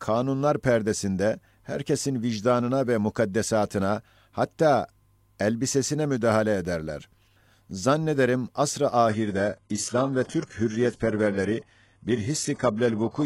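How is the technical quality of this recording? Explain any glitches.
The speech quality drops abruptly at 9.09 s and stays degraded to the end at 13.26 s. There is no gap, but the treble turns dull and synthetic, with nothing above 11.5 kHz. This is an adaptive stream at a lower bitrate: a slowing connection forced the player to switch versions, and the swirly highs point to a very low-rate HE-AAC stream at roughly 12 kbit/s.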